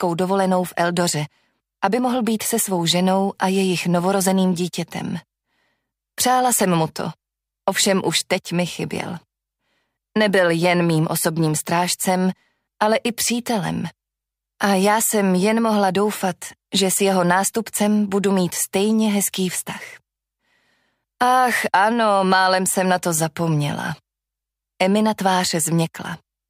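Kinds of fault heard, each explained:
No faults heard.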